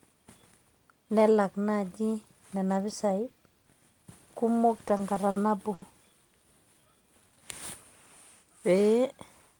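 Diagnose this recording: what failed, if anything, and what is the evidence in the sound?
Packets reached the receiver late and unevenly, so its jitter buffer ran dry five times between 4.78 and 5.37 s. This is a network-stage problem. Each time, the receiver extended the last sound until data arrived. The gaps were bridged with about 100 ms of filler in total, the longest a 50 ms hold, covering roughly a sixth of that stretch. No speech is lost, but the speech drags and stutters through that half-second as repeated stalls.

Shortly afterwards a single packet missed its slot, producing a short stall from a late packet between 5.74 and 5.83 s. The buffer emptied and the receiver held the current sound for 80 ms before resuming from exactly where it left off. That pause shifted playback delay by 80 ms. Nothing is missing; the sound at that point is simply held too long.

From 6.74 to 7.40 s the jitter buffer was rebuilding its reserve, giving a jitter buffer slow-down. 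Rather than stop outright, the receiver repeated individual pitch periods and fragments of pauses many times over, adding 96 ms of material. Playback ran at 87% speed while pitch stayed unchanged, so the speech sounds stretched and unhurried across that span.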